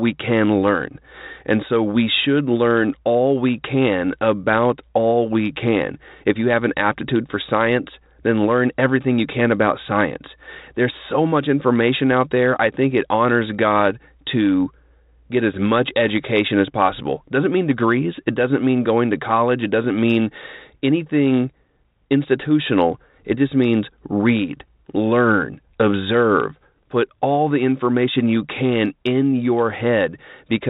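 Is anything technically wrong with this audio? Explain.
No, nothing technically wrong.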